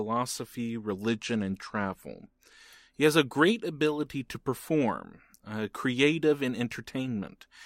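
From 1.08 to 2.64 s, a Bluetooth SBC bit pool drop starves the upper sub-bands. Treble dulls and gritty noise rises, which fits a bit pool near 12.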